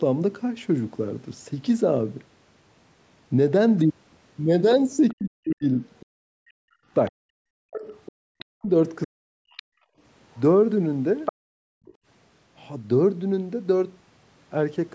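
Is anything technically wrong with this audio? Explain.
Yes. There are three echo-canceller faults in this speech.

Other side's voice leaking through: a faint second voice appears at 5.09–6.06 s and 8.06–8.45 s, and much more plainly at 9.57–11.93 s, where it is only around 10 dB under the talker. It is likely residual loudspeaker echo the canceller failed to subtract. Unlike room reverb, it is a separate voice.

Speech suppressed in double talk: between 5.12 and 9.42 s the talker's own voice dips in pieces, roughly 40 dB at worst, for about two seconds in total. This likely happens because overlapping talk made the canceller attenuate everything. Unlike gating, it is the main voice that drops.

Background gated by the echo canceller: the room sound itself vanishes at 6.49–6.87 s (about 40 dB), 9.70–9.99 s (about 32 dB) and 11.33–12.06 s (about 40 dB). The canceller clamped the microphone while the loudspeaker played, producing brief silent holes in the background rather than dips in the voice. 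The call's microphone band limit, with nothing above 8 kHz, is normal.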